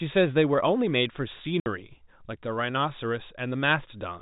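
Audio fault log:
1.60–1.66 s packet loss filled with silence: a clean 60 ms hole with hard edges, consistent with three lost 20 ms packets. Concealment would instead leave repeated or faded sound in the gap.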